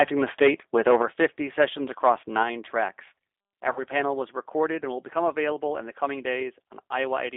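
The recording is speech carried through a G.729 codec, heard as an 8 kbit/s telephone-band sound confined to roughly 300 Hz to 3.6 kHz. Unlike simple band-limiting, the damage here is plainly audible: a rough, slightly synthetic texture comes from rebuilding each frame out of a few pulses and a pitch predictor. From 0.0 to 0.5 s the loudest peaks crackle harshly, most likely from microphone overload, with the input about 7 dB too hot and around one sample in twenty flattened at the converter's limit. The codec's roughness is spread evenly through the clip, but this harshness stays on the opening peaks alone. Between 3.73 and 3.84 s there is VoIP packet loss concealed by the speech codec. About 30 ms of audio, which fits a single lost packet, is filled with a stretched continuation that fades instead of falling silent. The sound then stays weak or distorted for a short while after the data returns, because each decoded frame builds on the state of the last.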